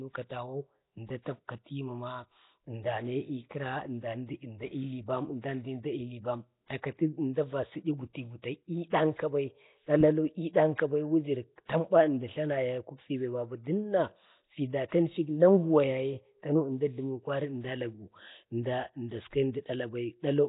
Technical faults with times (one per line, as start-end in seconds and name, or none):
0.00-20.49 Nellymoser compression